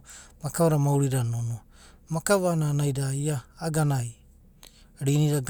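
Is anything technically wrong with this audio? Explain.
No, nothing in this speech recording points to a technical fault; the signal stays intact and consistent throughout.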